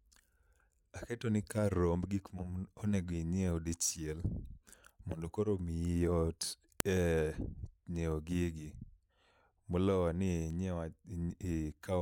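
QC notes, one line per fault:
6.80 s, file header played as audio: a sharp, loud click where a second piece of speech was joined with its WAV header still attached, so those bytes played as samples.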